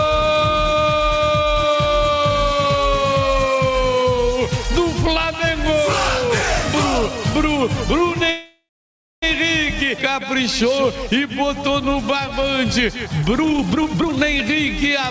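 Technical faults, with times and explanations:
8.30–9.24 s, call audio freeze: packets likely stalled and the jitter buffer emptied, so the last sound fades into 590 ms of silence before resuming unchanged.
13.39–14.20 s, jitter buffer speed-up: the receiver shrank an overfull buffer by cutting roughly 0.7 s of pitch-period slices, so the audio rushes at about twice normal speed.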